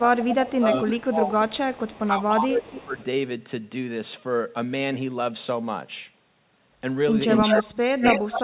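From 0.00 to 1.34 s the speech dips by roughly 10 dB in pieces, about 0.7 s in all. This is speech suppressed in double talk, likely caused by an echo canceller ducking the near talker while the far side was also talking. The level sinks and recovers with the overlap rather than dropping to silence the way packet loss would.

From 0.21 to 3.04 s an echo leak is heard as a repeat of the speech 301 ms late, about 10 dB below it, likely from a loudspeaker echo the canceller failed to remove. A distinct delayed copy sets it apart from room reverberation, which smears into the sound instead of repeating it.

Inside that span, from 2.04 to 2.97 s, the speech is suppressed in double talk again, now dipping by about 15 dB over roughly 0.7 s, likely from the same ducking.

From 7.29 to 8.44 s a second echo leak arrives 204 ms late and roughly as loud as the speech itself. This is likely a badly uncancelled loudspeaker path. 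From 7.40 s to the end, the speech is suppressed in double talk by as much as about 30 dB, again likely because the canceller turned down the near side during the overlap. It fades far deeper here than in the earlier dips.

Throughout, nothing reaches above 4 kHz, which fits G.711 mu-law telephone coding on the call path.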